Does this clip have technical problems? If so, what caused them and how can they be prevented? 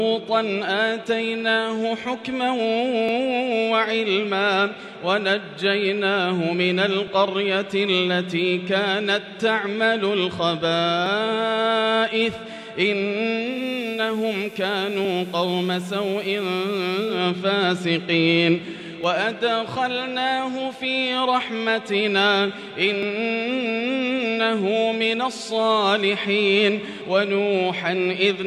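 Yes. Audio missing between chunks: brief skips at 3.09, 7.07, 11.06, 15.05, 19.04, 23.03 and 27.01 s. Each is a tiny jump, roughly 10 ms, every 4 s. This is likely a recorder losing audio between chunks. Overlapping buffers or gapless chunk handling would prevent it.

Digital radio blending to analogue: from 13.44 to 17.26 s, the sound cross-fades to FM over about 0.23 s. The level drops about 2 dB and hiss rises, around 30 dB below the signal. Better digital reception, through a stronger antenna or position, would prevent it.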